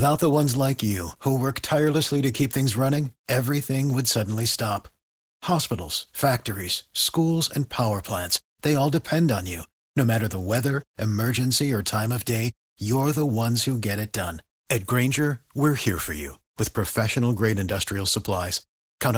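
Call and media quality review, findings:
Opus voice compression, throughout: hoarse, faintly robotic speech; damage plainly audible. Hybrid mode: SILK linear prediction below 8 kHz, a thin CELT layer above. Coarsely coded excitation fits a 16 kbps stream.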